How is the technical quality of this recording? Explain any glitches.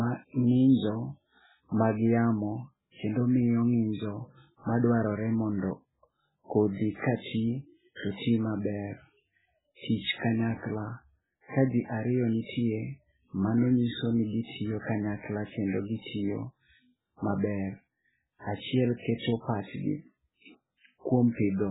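Poor: heavy compression damage runs through the whole recording, and one attack is preceded by a brief smear of noise.

Throughout, the encoder, likely MP3 starved of bits, cuts the treble at a fixed point and switches weak frequency lines on and off between frames. Nothing survives above 3.8 kHz, so the speech sounds dull, watery and swirly. The damage fits a very low bitrate of around 8 kbps.

At 4.79 to 4.84 s a pre-echo appears. A sharp attack falls late in a transform block, and the quantisation noise sized for it spreads across the whole block. About 46 ms of hiss leads into the onset, which sounds soft and smeared.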